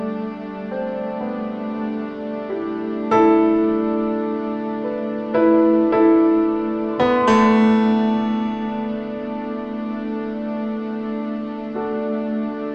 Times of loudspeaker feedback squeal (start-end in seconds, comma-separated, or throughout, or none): 6.90-7.77